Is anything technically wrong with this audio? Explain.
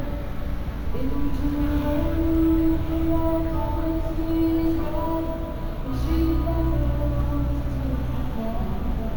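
Yes. Throughout, a bright metallic fizz tracks the sound's level, with the lowest mirror band from 8 to 16 kHz at about 29 dB below the signal. This is imaging from sample-and-hold upsampling: each sample was simply repeated without smoothing, which fits a 16 kHz source raised to 48 kHz.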